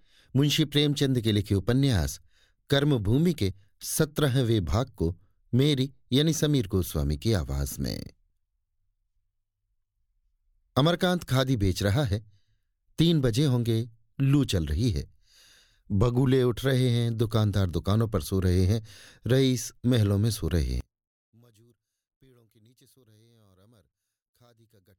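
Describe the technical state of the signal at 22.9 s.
One channel inverted, 20.81 to 24.98 s: likely reversed polarity on one side, so the centred speech cancels in mono, falling about 36 dB to a faint trace.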